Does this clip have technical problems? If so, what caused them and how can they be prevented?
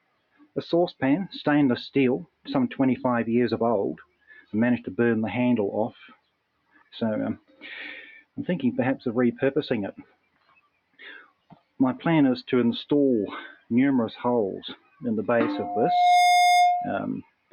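Yes. A noise suppressor applied to music or sounds, a speech-tuned one, stays on throughout. It mistakes sustained material and tails for noise, so the level keeps pumping by roughly 10 dB as attacks pass and held parts sink. Bypass suppression on anything that isn't speech.

There's also sound cut by the noise suppressor, deeper dips of about 15 to 21 dB, at 0.0–1.02, 2.26–2.47, 4.0–4.53, 5.92–8.37, 9.97–11.79, 13.53–13.7, 14.76–15.02 and 17.22–17.52 s. The longest are around 6–8 s and 10–12 s. Same fix: switch the suppressor off.

From 15.53 to 17.04 s there's a loudspeaker feedback squeal at 712 Hz. The mic picks up its own speaker, and the loop gain goes past one at that frequency, so the tone swells over about 0.7 s to roughly 10 dB above the sound. Keep mics out of the speakers' throw and notch that frequency.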